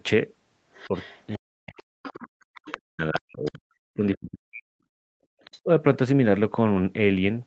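From 0.73 to 1.36 s a faint second voice sits under the speech, about 25 dB below it. This is the other side's voice leaking through, likely loudspeaker echo that the echo canceller failed to fully remove from the microphone. Overlapping it, from 0.88 to 1.86 s, the main talker dips and breaks up in pieces, roughly half a second in total and by up to about 40 dB. That is speech suppressed in double talk, likely the canceller turning everything down because it could not separate the talker from the echo.

From 2.03 to 3.51 s the leaked voice returns louder, only about 15 dB below the speech. Inside that stretch, from 2.35 to 2.41 s, the room sound drops out by about 31 dB for roughly 70 ms. This is the background gated by the echo canceller, which clamped the microphone while the loudspeaker played. From 2.82 to 4.69 s the talker is again suppressed in double talk, cut by up to about 40 dB across roughly 1.5 s. 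A second gating dip follows from 4.97 to 5.19 s, about 40 dB deep and lasting around 200 ms. Finally, a brief scrap of leaked voice appears from 5.41 to 5.6 s at about 25 dB below the speech, and from 5.63 to 5.67 s the talker dips by about 20 dB.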